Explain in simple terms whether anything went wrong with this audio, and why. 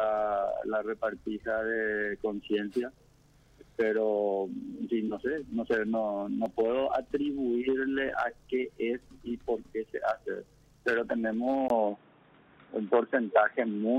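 An input switched to a poorer device at 11.68 s, and the sound stays that way to the end. A brief gap marks the moment. After it, everything above 3.8 kHz is gone, so the sound turns dull and boxy, the level shifts a little, and a new faint background noise appears. The likely cause is that the recording system swapped to a lower-quality microphone or headset partway through.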